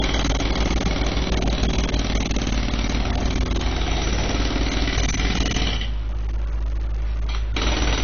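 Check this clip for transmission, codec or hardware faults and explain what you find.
One codec fault runs through the whole recording: low-bitrate audio saved at a high bitrate. Nothing sounds above about 6.6 kHz, leaving the audio dull and band-limited. This likely comes from a very low-bitrate encode, such as 24 kbit/s AAC, later re-encoded as high-bitrate MP3, which cannot restore the discarded content.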